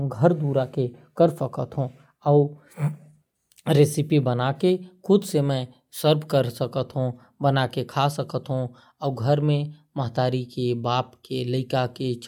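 The speech in this recording carries no audible technical faults at any point, with the signal remaining continuous and stable throughout.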